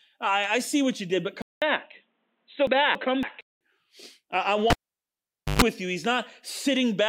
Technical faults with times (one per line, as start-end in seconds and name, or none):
1.42-3.61 input switched to a poorer device
2.67-3.23 frames out of order
4.70-5.62 cable pulled and plugged in